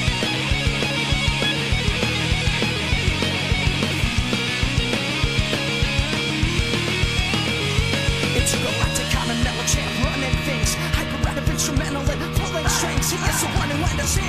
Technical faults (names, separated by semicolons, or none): damaged data in a compressed stream